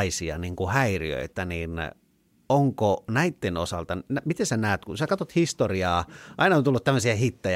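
No technical faults can be heard anywhere in the recording.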